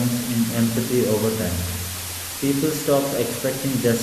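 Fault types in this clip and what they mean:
Low bit depth with dither: The speech has been stored with very few levels per sample, which fits a 4-bit signal. Before rounding, random noise was added, so the rounding error turns into steady white noise instead of distortion. Here that hiss is constant and even through the whole clip. It is very loud, only slightly quieter than the speech itself. The speech stays clean in shape but sits under a thick bed of noise.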